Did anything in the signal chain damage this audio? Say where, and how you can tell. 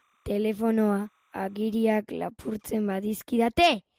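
Yes. Timecode bleed in the analogue wiring: from 0 to 2.0 s a faint chirping warble sits far below the speech. Linear timecode at 29.97 frames per second leaked in from a nearby line, its square wave switching between roughly 1 and 2 kHz. A spectrogram shows alternating bands there, ending at 2.0 s.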